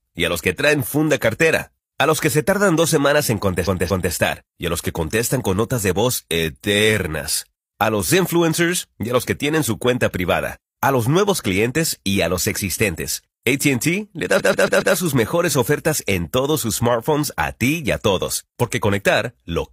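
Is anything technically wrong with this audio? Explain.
Yes. This speech has repeated frames, with compressed frames replayed, so the same fragment plays again and stutters. At 3.63 to 4.09 s, after "tardan dos semanas en", a 232 ms block of about five frames plays twice more, adding 0.46 s. At 14.35 to 14.91 s, before "sus mejores ofertas en", a 139 ms block of about three frames plays four extra times, adding 0.56 s.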